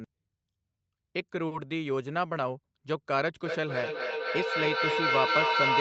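At 1.47 s to 1.53 s, a short stall from a late packet holds the sound for 40 ms. It stretches slightly, and nothing is lost.

From 3.46 s to the end, a feedback howl builds as the sound loops between two devices. It rings near 1 kHz, repeats roughly every third of a second, and peaks about 3 dB above the speech.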